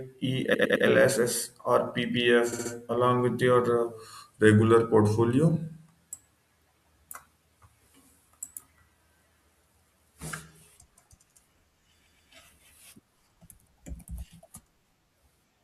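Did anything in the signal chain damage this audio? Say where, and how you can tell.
Yes. The first fault is repeated frames, at the codec or storage stage. At 0.53–0.85 s a 106.7 ms stretch of the speech plays three extra times, adding 320 ms. At 2.52–2.71 s, just before "along with", a 64 ms block repeats three more times, adding 192 ms. At 12.05–12.31 s a 128 ms block plays twice more, adding 256 ms. Each copy is identical, and the clip grows longer. Dropout concealment would fill gaps instead of duplicating audio.

The second fault is a drift correction step, which sits at the driver or buffer stage. From 3.92 to 5.91 s and again from 10.22 to 11.42 s, the speech suddenly slows by about 5.6% and drops a full semitone (100 cents). It holds there steadily through each span. Speed and pitch move together as a flat step, not the continuous wobble of wow, which points to a clock-matching resampler that likely lowered its rate at once to rebalance its buffer.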